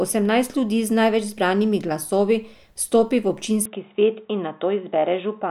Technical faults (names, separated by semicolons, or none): input switched to a poorer device